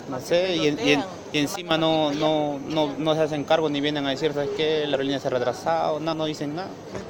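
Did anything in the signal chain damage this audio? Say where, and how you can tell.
Yes. A sudden gain jump of about 12 dB drops sound and noise together from 1.56 to 1.71 s. The waveform envelope steps abruptly, likely from an unramped digital gain change.

Compressed frames were skipped at 4.94 s and 6.13 s in the codec or storage stage. About two 32 ms frames are lost each time, so the audio leaps ahead.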